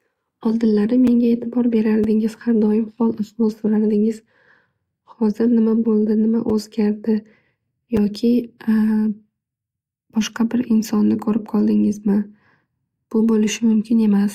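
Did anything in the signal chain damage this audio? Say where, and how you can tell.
Yes, at the buffer stage: blocks of digital silence, 5.3 ms each, tick at 1.07, 2.04, 6.50 and 7.97 s, fitting unfilled 256-sample buffers.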